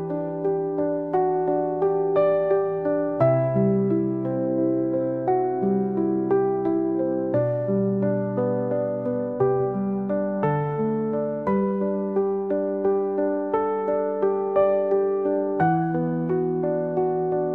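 Nothing technical stands out here; the audio simply runs its course without any fault worth flagging.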